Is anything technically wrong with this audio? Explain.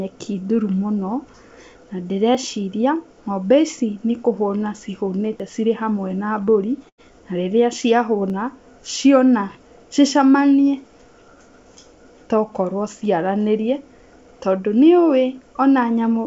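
Yes. The speech has three kinds of fault, heard over a G.722 call path whose audio stops at about 7 kHz.

Dropped buffer (overrun) at 2.35 s, 5.40 s and 8.30 s: each is a jump, the speech skipping forward with no silence between. The likely cause is the recording program falling behind so the hardware overwrote samples it hadn't collected, and the two sides were butted together. The 5.40 s jump, just before "cirĩ hamwe na", loses roughly 70 ms; the other two lose about 20 ms each.

Short concealed packet loss from 6.44 to 6.50 s, right after "cirĩ hamwe na": about 30 ms of audio never arrived in time, and the receiver covered roughly 25 ms of it by extending the preceding sound before crossfading back into real audio. It is heard as a brief smeared wobble.

Burst of packet loss from 6.89 to 7.01 s, leading into "na rĩrĩa": about 90 ms went missing in a row. The decoder filled 88 ms by prolonging the last sound and lowering it as the gap ran on, so a held buzz or fading hiss sits where the speech should be, and the talk then resumes further along with that stretch lost.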